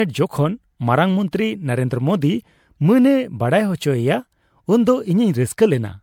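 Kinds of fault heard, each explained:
Generation loss: the speech sounds swirly, smeared and hollow throughout, with blurred consonant onsets, likely from about five successive MP3 re-encodes that fit a 96 kbit/s chain. A single encode at that rate would not sound this hollow, even with content reaching 19.9 kHz.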